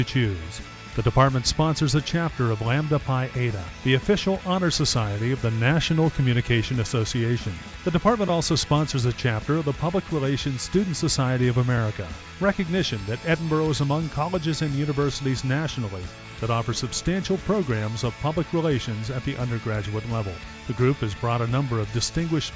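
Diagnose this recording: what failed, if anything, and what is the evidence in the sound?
Nothing in this recording points to a failure at any stage of the chain. No audible event marks a break in the sound, so there is nothing to trace to wiring, conversion, buffering, processing, transport, storage or playback.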